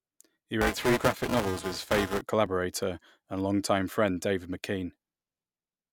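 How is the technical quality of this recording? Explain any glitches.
The recording has two faults, both in the first half of the speech.

Buffer tearing runs from 0.61 to 2.21 s. The writer and the playback hardware have drifted out of step, so within every period the reader crosses into stale data. Roughly a fifth of each buffer holds audio from a few milliseconds earlier, spliced in with hard edges. The result is a steady robotic buzz at 375 Hz, which fits a 128-sample buffer, and it is present only while someone is talking.

A corrupt frame decoded appears at 2.46 s. Damaged bits in a single compressed frame were decoded anyway, so misread values put energy at wrong frequencies for that frame's length, producing a brief chirp, blip or burst of noise.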